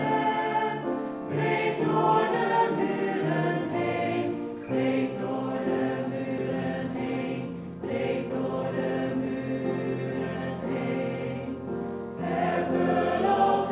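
At 6.38 to 6.40 s the sound jumps forward with no silent gap: roughly 0.7 s of audio is simply gone, and the material on either side is butted together. This is a skip ahead. Audio was dropped, either on the way or by the jitter buffer, so that playback could catch up with later packets, which cut the delay by about the same 0.7 s. What sets it apart from a dropout is that nothing is filled in. There is no hole, hiss or faded stretch, only an abrupt splice where continuity breaks.

From 6.60 to 9.36 s the audio runs at about 109% of normal speed while the pitch stays where it was. That is the jitter buffer speed-up. The buffer was still holding more than its target, so the receiver repeatedly cut out short slices a pitch period or so long, about a third of a second in total across the stretch, and it sounds hurried. A plain playback-rate error would raise the pitch along with the speed, and that doesn't happen here. 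Throughout the clip the call path's G.711 mu-law coding keeps everything below 4 kHz.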